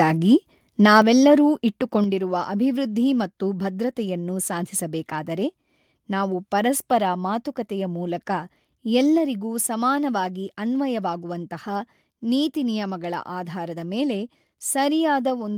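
From 0.95 to 0.99 s the loudest speech peaks are flattened with a harsh, crackling edge: microphone overload. The input level likely ran about 2 dB past the converter's ceiling, so a few percent of samples had their tops clipped off.

At 1.02 s and again at 2.04 s, just before "ಅಭಿವೃದ್ಧಿ ಮತ್ತು ಭದ್ರತೆಯನ್ನು ಸಾಧಿಸಬೇಕಾದರೆ", speech and background both drop abruptly by about 5 dB. This is microphone volume stepped down, likely the call software cutting the device's input gain, the first time right after the clipped peak.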